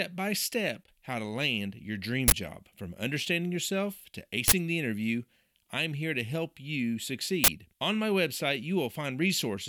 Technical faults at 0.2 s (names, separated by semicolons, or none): none